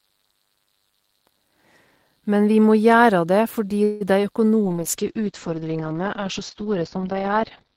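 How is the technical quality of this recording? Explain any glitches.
The quality takes a clear hit in the second half, with three separate call-transport problems stacked close together.

First, at 3.83 to 4.03 s there's a call audio freeze, about 0.19 s long. The sound stalls and the last bit gets stretched out as a fading buzz or hiss instead of dropping to silence. Likely cause: packets got held up in transit and the jitter buffer ran dry, so the receiver improvised. When the packets showed up, playback resumed from where it stopped. Nothing seems lost, but everything after it now runs about 172 ms later.

Next, at 4.23 to 4.25 s comes a short concealed packet loss. Roughly 20 ms of audio never made it to the decoder in time, and the receiver patched the hole by continuing the previous sound briefly and then blending back into the real signal. You hear it as a quick smear or wobble rather than a clean dropout. 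It's tiny, and it sits right after the freeze.

Finally, from 4.64 s to the end there's a call bitrate drop. The bandwidth estimate fell and the encoder went from 32 kbps down to 8 kbps, staying at the bottom for nearly 3 seconds. At that rate Opus codes coarsely and narrows the bandwidth from around 20 kHz to 6 kHz, so the speech turns muffled and rough, with the air and upper sibilance gone right through to the end.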